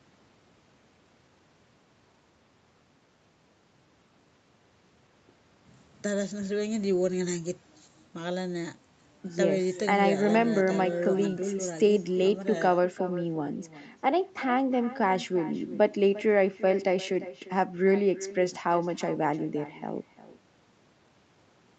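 Right from the start and all the way through, every phrase has a faint, thinner copy trailing it by roughly 400 ms, sitting about 16 dB under the speech. That's echo with no canceller: the far end is playing the call out loud, its microphone hears it, and nothing strips it out before it comes back across the network. On top of the band-limited call sound, with nothing above 8 kHz, it gives the speech a constant hollow shadow.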